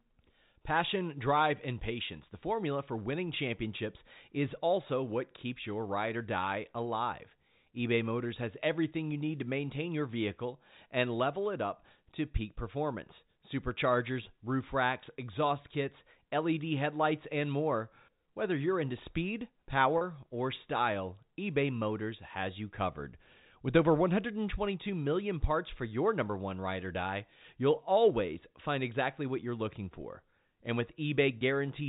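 Packet loss with pitch repetition occurs at 19.98 to 20.01 s and again at 31.38 to 31.41 s. Each 30 ms gap, consistent with a single lost packet, is bridged by repeating the last pitch period, giving a brief held, buzzy tone over the band-limited telephone sound of the G.711 coding.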